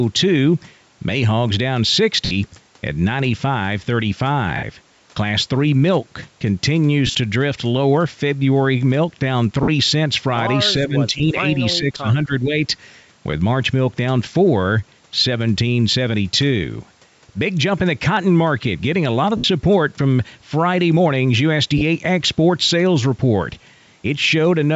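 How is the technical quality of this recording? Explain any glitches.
The speech has two recurring faults: short dropouts from lost LE Audio frames, and dips where the talker is turned down during double talk.

Lost LE Audio frames occur at 2.25–2.32, 4.57–4.63, 7.07–7.15, 9.63–9.69, 11.18–11.21, 19.37–19.44 and 21.78–21.82 s. Most gaps last 50 to 70 ms. At 11.18 s the gap is only 20 ms, and at 21.78 s it is 30 ms. The 7.07 s loss is broken into pieces over 80 ms, with the longest run around 40 ms. These lengths fit runs of 10 ms frames. The decoder fills each gap by repeating the last spectrum with scrambled phase. The speech briefly smears into a hissy, noisy blur.

Speech suppressed in double talk happens at 10.86–11.37 s, about 10 dB down at its deepest, and at 11.77–12.55 s, about 15 dB down. It most likely comes from an echo canceller that turns the talker down while both sides talk at once. 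The near talker gets quieter and duller or breaks up over a few hundred milliseconds. The level drops, but the sound does not smear. That makes it different from the frame losses, which are shorter and replace the speech with a noisy stand-in. Across the whole clip, the call's microphone path limits the band to 8 kHz.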